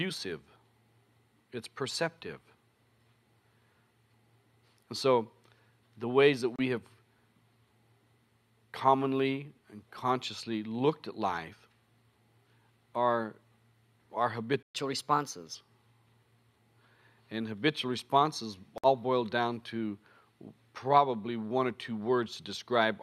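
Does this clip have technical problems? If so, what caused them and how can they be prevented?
Yes. A likely Bluetooth dropout, where packets missed the headphones' deadline and were discarded, cuts abrupt holes of about 28 ms at 6.56 s and 56 ms at 18.78 s, consistent with two and four lost frames. Keeping the headphones close to the source with nothing in the way, and away from crowded 2.4 GHz traffic, prevents this.

A likely playback stall, in which the player ran dry of data or its thread was blocked, silences the sound mid-flow for 120 ms from 14.63 s to 14.75 s. A larger playback buffer and giving the audio thread higher priority prevent this.

Catch-up at higher speed follows immediately. The player resamples its backlog at 1.15 times normal speed from 14.75 s to 15.55 s, so the sound rises about two semitones, then settles. Preventing the stall removes the need for catch-up, and a player set to drop the backlog instead of speeding through it avoids the pitch jump.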